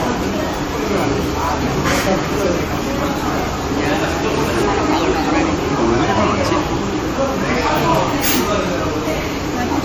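Generation loss runs through the whole clip, with swirly, hollow smearing and blurred attacks beyond what one encode would give. It likely comes from about five passes through a lossy AAC-LC codec, consistent with 64 kbit/s, each re-quantising on a shifted frame grid so the errors stack up.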